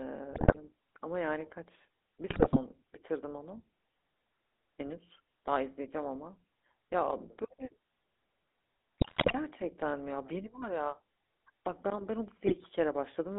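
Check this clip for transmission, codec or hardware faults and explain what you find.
The speech has passed through a GSM full-rate codec over the whole clip, and a weak radio link adds GSM bit errors in four short bursts.

GSM full-rate codec: the encoder reduces the voice to a vocal-tract filter driven by a sparse, regularly spaced pulse excitation, which fits a 13 kbps full-rate stream. The band runs only from 300 Hz to 3.6 kHz, and the voice carries a plainly audible buzzy, gravelly roughness throughout.

GSM bit errors at 0.32 to 0.57 s, 2.30 to 2.59 s, 8.98 to 9.34 s and 12.46 to 12.67 s: corrupted bits reach the decoder, so damaged filter, pitch and gain values distort the spectrum and level frame by frame. The voice breaks into squawks, pops and gargling. The burst at 8.98 s is the longest and roughest.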